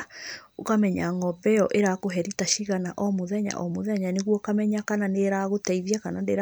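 Nothing in the speech stood out as a technical problem on listening.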